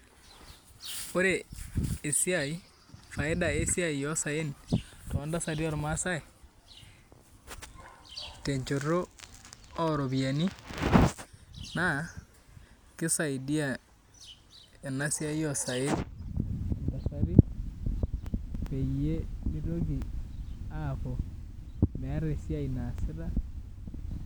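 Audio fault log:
No audible faults turned up anywhere in this recording.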